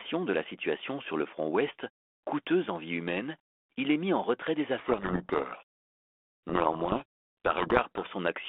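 From 4.78 s to 8.08 s harsh, gritty distortion buries the speech. This is a codec payload misread: each G.726 code word is unpacked in the wrong bit order, so every decoded step is wrong. Before it, the 32 kbit/s narrowband line sounds only lightly coloured.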